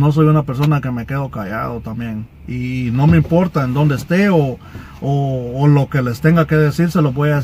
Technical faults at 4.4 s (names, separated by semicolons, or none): none